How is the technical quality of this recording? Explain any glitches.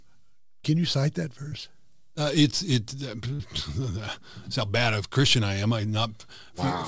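The recording has two brief glitches of one kind. Both sit on a call path where nothing reaches above 8 kHz, which fits a wideband codec such as G.722.

Short concealed packet loss occurs at 1.48–1.54 s and 3.35–3.42 s. Each time, about 40 ms arrived too late, so the receiver continued the preceding sound and blended back. It is heard as a brief smear or wobble.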